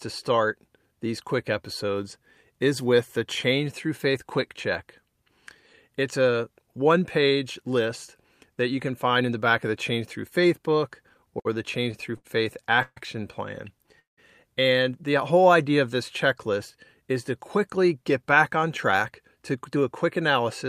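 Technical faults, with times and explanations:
11.09 to 12.98 s, repeated stalls (stutter): late packets kept draining the jitter buffer, so the receiver stretched the last sound through nine short gaps, the longest 140 ms, about 350 ms in all. Nothing is lost, but the speech drags and stutters for almost two seconds.
13.99 to 14.19 s, call audio freeze: the likely cause is packets held up on the network, leaving the jitter buffer empty. The last sound is carried on briefly and then fades to about 150 ms of silence. The speech then resumes where it stopped, roughly 180 ms late.
17.01 to 20.68 s, jitter buffer speed-up: after "idea of this checklist" the receiver works off surplus buffered audio by cutting many short pitch-period pieces, roughly a third of a second in total. The speech runs about 7% fast at unchanged pitch and sounds hurried.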